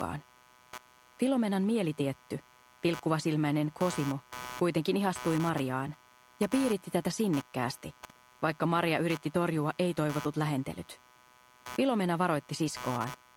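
Running under the sound the whole way through is computer activity noise, a buzzy, chirping layer pulsing at around 150 times a second and sitting about 20 dB below the signal. It's the machine's processor or graphics load shaking the shared ground, so it tracks the computer, not the audio.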